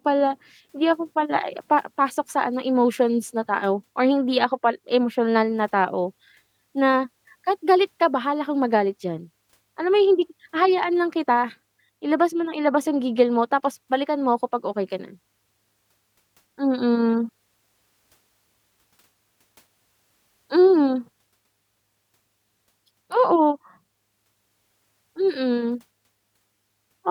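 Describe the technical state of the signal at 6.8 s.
The audio is intact at 6.8 s, with no fault present at that moment.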